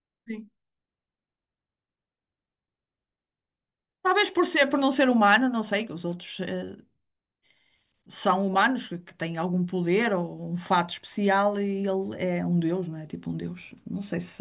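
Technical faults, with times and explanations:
No technical faults detected.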